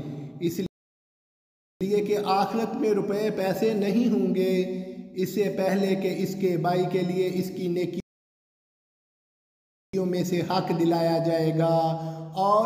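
Playback stalls at 0.66 to 1.81 s and 8.00 to 9.93 s cut the audio to silence for about 1.1 s and 1.9 s, likely because the player ran short of data.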